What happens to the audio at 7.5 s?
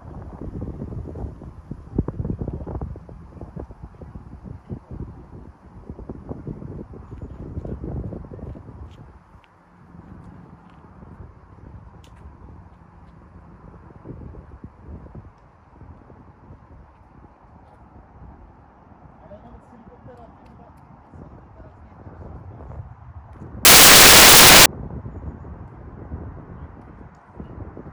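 At 7.5 s the audio plays through intact, with no audible fault at that moment.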